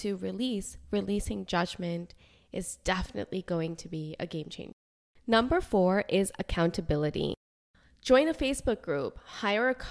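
Speech with no audible faults.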